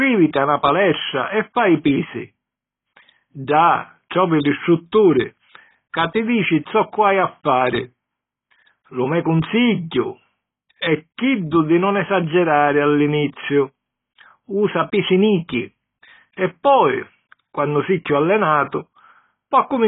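A speech recording that has likely passed through heavy AAC compression at a very low rate, consistent with about 16 kbps. Across the whole clip nothing survives above 3.8 kHz, so sibilants sound dull and fizzy, with warbling smear on sustained sounds.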